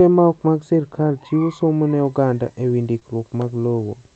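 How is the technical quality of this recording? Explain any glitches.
Two faults are audible in the second half of this speech clip: an uncorrected treble lift and a brief concealed gap. The audio travels over a call codec whose top end stops near 8 kHz.

From 2.05 s to the end, just after "sirkal chiwo somo ne", pre-emphasis is left on. The treble boost from the CD 50/15 µs curve was never undone, leaving highs about 8 dB up at 10 kHz relative to 1 kHz. The sound turns thin and hissy. Unlike a steady bright EQ, it switches on abruptly mid-clip.

From 2.99 to 3.03 s there is a short concealed packet loss. About 20 ms of audio never arrived, and the decoder filled roughly 18 ms by extending the preceding sound before blending back. This produces a quick smear rather than the silent hole or sharp click of a plain dropout.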